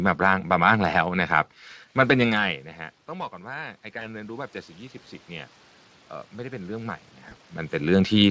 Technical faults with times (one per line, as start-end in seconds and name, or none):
3.07-5.59 automatic gain rising
3.99-4.04 VoIP packet loss concealed by the speech codec
7.29-7.34 VoIP packet loss concealed by the speech codec